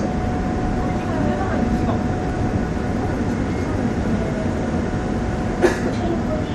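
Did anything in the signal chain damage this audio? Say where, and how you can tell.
Yes, three faults are audible.

Codec stage: the whole clip has a watery, swirling quality, with weak detail flickering in and out and transients smeared. That unstable low-level content is the signature of a starved perceptual encoder, likely MP3 compression at a low bitrate around 64 kbps, where the encoder discards quiet spectral lines to save bits.

Driver or buffer stage: a steady 43.1 Hz buzz runs through the entire clip. That rate fits a 1024-sample block at 44.1 kHz. This is a block size mismatch (truncated): one stage writes blocks longer than the next stage reads, so the tail of each block is dropped and every seam produces a small discontinuity at the block rate. The size difference is small enough that playback speed stays essentially normal.

Buffer or storage stage: between 2.30 and 2.50 s the sound briefly jumbles. 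This comes from chunks out of order. The audio is handled in 100 ms chunks, and one chunk arrived or was written one slot late, so it plays after the chunk that should follow it. No audio is lost, but the swapped sequence creates hard edits that are heard as a garbled moment.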